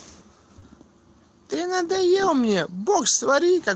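At 0.59 to 0.64 s, short concealed packet loss: about 20 ms of speech never reached the decoder, so the receiver extended the preceding sound to bridge the gap, leaving a brief smear.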